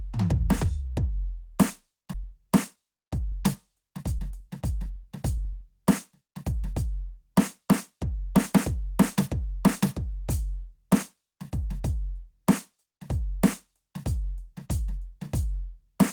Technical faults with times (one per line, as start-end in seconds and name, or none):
2.13-2.15 skip ahead
2.24-6.83 jitter buffer speed-up